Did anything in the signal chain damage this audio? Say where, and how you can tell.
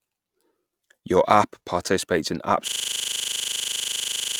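Yes, there's a system hang loop at the driver or buffer stage. Right after "app participates in," at 2.68 s, a 40 ms slice starts repeating exactly until the end, a 25 Hz machine-gun stutter. The host froze while the hardware kept replaying the same ring buffer.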